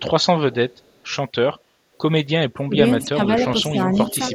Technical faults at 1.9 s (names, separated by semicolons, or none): none